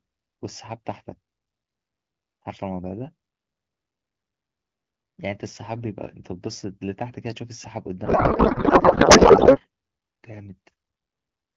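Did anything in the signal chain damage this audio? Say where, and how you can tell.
Yes, at the codec stage. From 8.05 to 9.60 s the speech turns into garbled noise and warble that barely tracks it. This is a codec payload misread: the AMR-WB frames' bits are unpacked with fields in the wrong places, which points to octet-aligned packing read as bandwidth-efficient.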